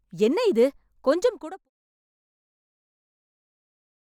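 The speech signal shows no technical fault, and the smooth fade-out that begins around 1 s and reaches silence at 1.7 s has no click or hard edge.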